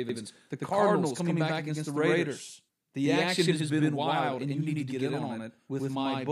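From start to finish the speech carries a channel delay (doubling) fault. One channel runs about 92.9 ms behind the other, a lag that fits a 4096-sample buffer at 44.1 kHz. When the two are summed to mono, the late copy does not blend. It lands as a distinct slap echo at the same level as the original, so every syllable is heard twice in quick succession, giving a doubled delivery across the whole clip.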